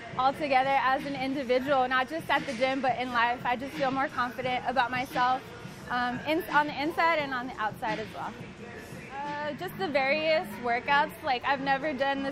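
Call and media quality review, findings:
No faults found in the audio, and no dropouts, distortion or timing problems to log against any component.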